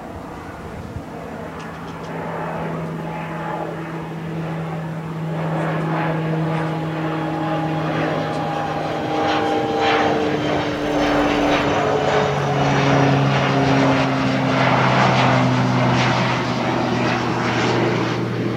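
A recording of everyday sound, with one processing fault between 10.75 and 11.63 s: a filter restarted on every block. Over that stretch a buzz at about 345 Hz rides on the sound, its loudness tracking the signal level. The filter discards its internal state at each block boundary and restarts from silence, so every block opens with a small transient. Those transients repeat at the block rate, and the 345 Hz spacing fits a 128-sample block.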